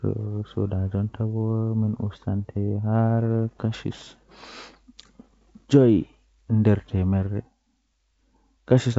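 No technical faults are audible.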